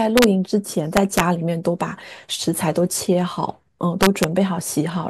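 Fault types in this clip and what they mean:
Integer overflow: loud peaks in the speech push past the top of the integer range and wrap to the opposite sign instead of being limited. That gives harsh, violent cracks, much sharper than clipping, around 0.18 to 0.24 s, 0.97 to 1.2 s and 4.03 to 4.24 s.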